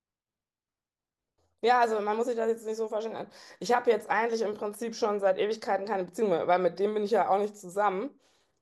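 No technical faults are audible anywhere in the speech.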